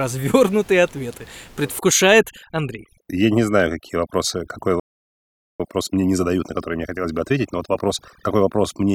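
From 1.79 s to the end, overdone noise removal is audible. The suppressor pulls individual frequency bands down hard wherever they sit close to its noise estimate, so the room noise, about 26 dB below the speech, collapses to near silence with twinkling specks, and quieter components of the voice are removed along with it.

At 4.80 s a playback stall cuts the output to silence for about 0.8 s, resuming at 5.60 s. The likely cause is the player running out of buffered data or having its audio thread blocked, leaving nothing to output until it recovered.

From 5.60 s to 8.60 s the player performs a time-compressed catch-up, running at 1.25 times normal speed to clear the backlog from the stall. It trims small segments and cross-fades across the gaps, so the speech sounds hurried at unchanged pitch.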